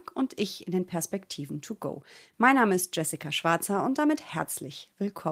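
Nothing here sounds wrong to the ear: the speech comes through without any glitch, dropout or distortion you could point to at any moment.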